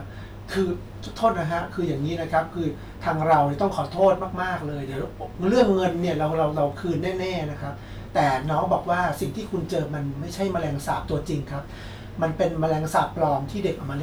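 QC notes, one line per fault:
3.32–3.41 s, 4.03–4.08 s and 5.58–5.62 s: hard clipping. Speech peaks overshoot the level a stage can pass, by about 2 dB in the first two bursts and about 4 dB in the third, so their tops are sheared flat. The added high harmonics crackle, harshest at 5.58 s.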